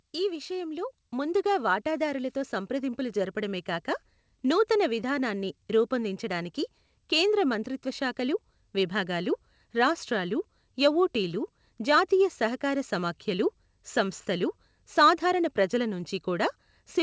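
Automatic gain rising from 0.21 to 3.96 s: the gain control judged the input too quiet and lifted it by about 8 dB, so speech and background swell together until "నూతన విధానాన్ని రూపొందించడానికి కేంద్ర".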